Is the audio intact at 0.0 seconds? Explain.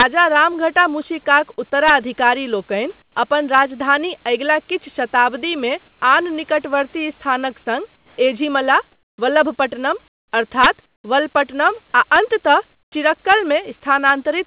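No, there's integer overflow from 0.00 to 0.02 s, just before "रामघटा मूशिकाक". Peaks pushed about 3 dB past full scale wrap to the opposite sign, giving a harsh crack.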